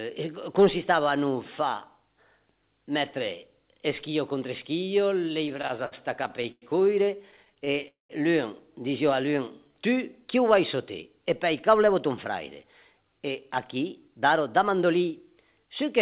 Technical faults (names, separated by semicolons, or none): repeated stalls (stutter); call audio freeze; jitter buffer slow-down; jitter buffer speed-up